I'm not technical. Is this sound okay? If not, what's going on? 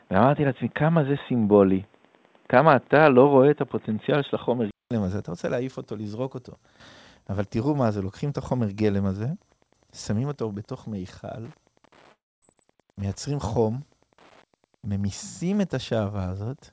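No. Wi-Fi interference runs throughout: a nearby wireless radio leaks into the audio circuit, adding faint, steady ticking about ten times a second.

Input switched to a poorer device, from 0.00 to 4.91 s: the speech sounds dull and boxy, with nothing above 3.8 kHz. This is likely a lower-quality microphone in use. It clears after a 0.2-second silence at the switch.

Long network dropout, from 12.12 to 12.44 s: the audio likely stopped arriving. The gap fills with a fading buzz, then a quarter-second of silence, and the speech resumes with that part missing.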